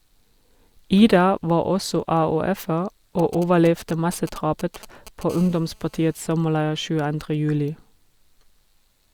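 From 3.19 to 5.23 s, GSM signalling bursts break into the speech: a nearby 2G handset sends short groups of radio bursts, and the audio circuitry rectifies them into a galloping dit-dit-dit of brief 217 Hz buzzes, sitting well below the speech level.

At 5.30 s, GSM phone buzz takes over and lasts until 6.15 s. The handset now transmits continuously at 217 bursts per second, as in a call, giving a steady, raspy 217 Hz buzz rich in harmonics, about 28 dB below the speech.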